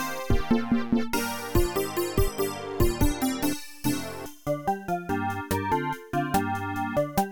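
Nothing in the audio stood out as a technical problem on listening.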